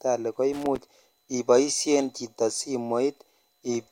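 Right near the start, from about 0.53 to 0.78 s, there's a burst of loose connector crackle, just before "ibodhen chito". It sounds like a worn or dirty contact somewhere in the chain shifting and flickering between connected and open, so the signal gets chopped into ragged bits, with pops where any DC on the line jumps. You hear it as an uneven scratchy crackle lasting about a quarter of a second.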